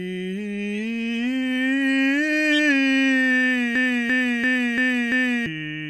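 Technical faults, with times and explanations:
0.73–0.80 s and 2.52–2.59 s, corrupt frame decoded: each is a brief burst of chirpy, squeaky noise lasting about 70 ms, roughly the span of two damaged compressed frames. Flipped bits made the decoder apply wrong gains or misread spectral codes, so energy lands at frequencies unrelated to the music. The first error peaks near -20 dBFS and the second is louder, near -10 dBFS. Unlike a loop, nothing repeats. The music carries on through a short, foreign-sounding blip.
3.76–5.46 s, system hang loop: the music abruptly locks into one fragment about 341 ms long that repeats exactly, five times, at about 2.9 times per second. This produces a mechanical, machine-gun-like stutter rather than a buzz. The loop length fits a 16384-sample ring buffer that the audio hardware kept replaying after the system froze, and roughly one and a half seconds of new audio is lost. 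The repeats are identical, with no spectral garbage, which sets this apart from the corrupt frames.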